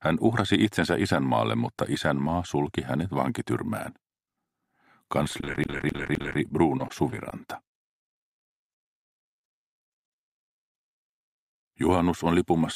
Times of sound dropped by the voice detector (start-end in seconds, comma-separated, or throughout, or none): none